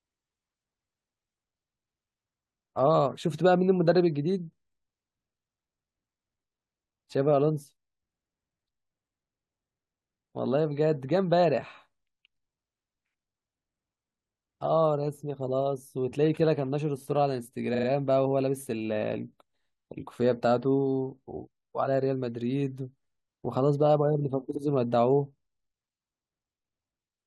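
Repeated frames at 17.74 s and 24.54 s: a run of compressed speech frames was played again. At 17.74 s a 42.7 ms block, fitting two frames, loops three extra times, a stutter adding 128 ms. At 24.54 s a 64 ms block, fitting three frames, repeats once, adding 64 ms.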